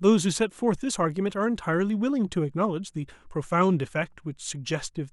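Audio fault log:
No faults are logged for this speech clip. Nothing in it calls for an entry on this log.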